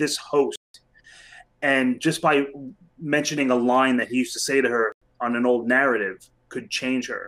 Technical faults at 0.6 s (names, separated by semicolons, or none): block of digital silence